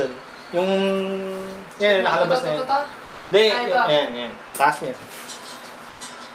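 At 3.05 s, for about 260 ms, the real background gives way to comfort noise in place of the background: a steady, featureless hiss at the same level, about 23 dB below the loudest sound. At 5.89 s the same happens for 100 ms, this time about 2 dB quieter. The transmitting end likely used Opus DTX, halting transmission during the pause while the receiver synthesised roughly matched noise.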